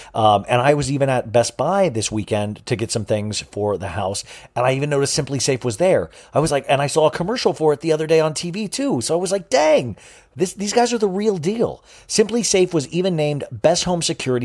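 Listening to the speech from beginning to end, nothing stood out as a technical problem.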